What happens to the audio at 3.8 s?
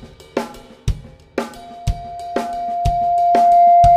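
At 3.8 s a loudspeaker feedback squeal is at full strength. It began at 1.55 s, when the microphone re-amplified its own loudspeaker and a 696 Hz tone built over about two seconds to roughly 15 dB above the sound, continuing to the end. A spectrogram shows one bright horizontal line, and the waveform envelope swells.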